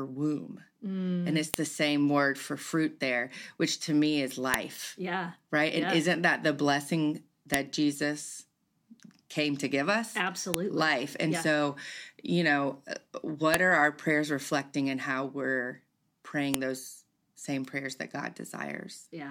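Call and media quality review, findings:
File header played as audio: sharp clicks at 1.54 s (before "same word for fruit"), 4.54, 7.54 (after "isn't that the blessing"), 10.54 (after "came to give us"), 13.54, 16.54 s. WAV headers left in joined 3 s chunks. Unlike dropout clicks, exactly periodic and independent of the speech.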